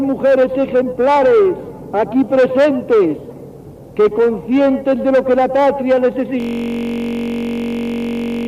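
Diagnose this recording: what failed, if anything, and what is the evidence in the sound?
The failure is a system hang loop at the driver or buffer stage. From 6.40 s to the end, one 21.33 ms fragment repeats exactly, nearly a hundred times, which fits a 1024-sample buffer being replayed after the host stopped refilling it. At that length the repetition fuses into a steady buzz at 46.9 Hz. A waveform shows an identical cell tiled end to end, and a spectrogram shows a frozen comb of harmonics spaced 46.9 Hz apart.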